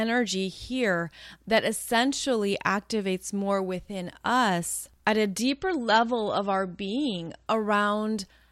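At 5.47 s the speech suddenly loses quality, with no gap. This is an adaptive stream at a lower bitrate. A slowing connection made the player switch to a leaner version of the stream. For two seconds, until 7.47 s, nothing is heard above 8.3 kHz. The treble turns dull, and codec artefacts rise. The sound points to a drop from MP3 near 128 kbit/s to around 33 kbit/s. Full quality returns just as abruptly.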